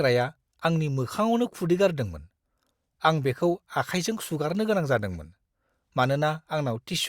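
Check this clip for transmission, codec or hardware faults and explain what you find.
Nothing to flag on this one: I listened through the speech and didn't hear any faults at all.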